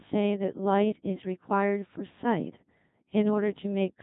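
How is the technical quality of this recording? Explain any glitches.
Poor, because the speech has passed through the Codec 2 vocoder throughout. Only pitch, voicing, energy and a coarse envelope survive, which fits a mode near 2.4 kbit/s, and sine-wave resynthesis leaves it heavily robotic and buzzy, with nothing above 3.8 kHz.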